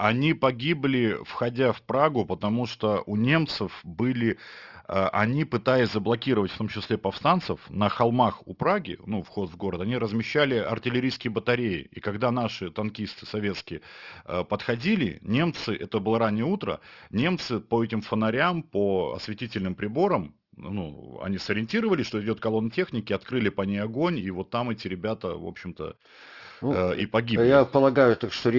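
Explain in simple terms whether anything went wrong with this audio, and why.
Throughout the recording, the s and sh sounds come out gritty and metallic, with harsh tones that don't belong. That's aliasing: the sound was resampled, consistent with a 12 kHz rate, without first removing content above 6 kHz, so those high frequencies folded back into wrong pitches.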